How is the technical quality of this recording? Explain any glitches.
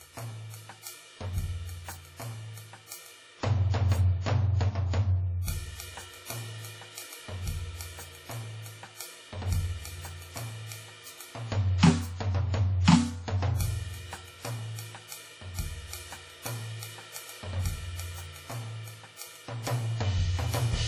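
The music carries heavy low-bitrate lossy coding throughout. WMA compression is the likely cause. Its transform coder works on long blocks, so quantisation noise smears over tens of milliseconds around each attack, giving a ringing, washy quality and a hiss that swells and fades with the signal. Weaker spectral detail has been dropped, and nothing sounds above 17.3 kHz. The damage fits a bitrate of around 32 kbps.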